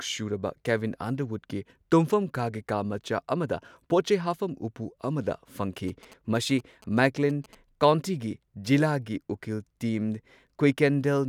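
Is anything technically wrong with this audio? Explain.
Yes. From 5.88 to 7.55 s the speech picks up GSM signalling bursts. A nearby 2G phone transmitting short groups of radio bursts is rectified by the audio circuitry, producing galloping ticks and brief 217 Hz buzzes around 25 dB below the speech. A spectrogram shows vertical click stripes and a 217 Hz harmonic comb in clustered groups, and the waveform shows spiky repeating pulse trains.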